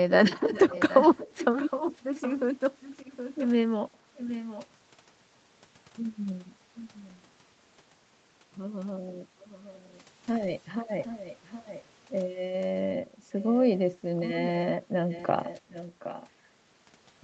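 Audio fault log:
0.09–3.48 s, 4.15–4.67 s, 6.75–7.17 s, 9.4–10.03 s, 11.04–11.84 s and 13.4–16.28 s, echo leak: the far end's echo canceller likely failed to remove its loudspeaker pickup, so the speech comes back 767 ms late as a second, trailing copy. It sits about 10 dB under the speech in the first two stretches, sinks to roughly 20–25 dB down around 7 s and 10 s, then returns near 15 dB down, an audible delayed shadow.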